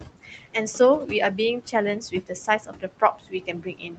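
Noise suppressor artifacts run through the whole clip. The room noise, about 12 dB under the speech, is pulled down by about 15 dB between phrases and returns beneath them. Unlike a gate, it reduces noise band by band rather than switching the whole signal.

The noise suppressor cuts into the speech at 0.23 to 0.55 s (about 12 dB, around a fifth of a second affected), 2.0 to 2.31 s (about 17 dB, roughly a tenth of a second), 2.47 to 2.84 s (about 16 dB, about a fifth of a second), and from 3.0 s to the end (about 16 dB). Quiet consonants and endings sound swallowed. A dropout would be an abrupt gap instead.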